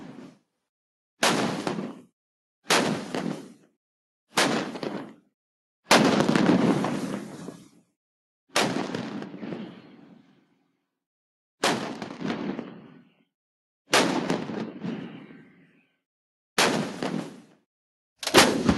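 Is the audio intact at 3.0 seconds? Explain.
Yes, at 3.0 seconds the audio is intact, with no audible fault at that moment.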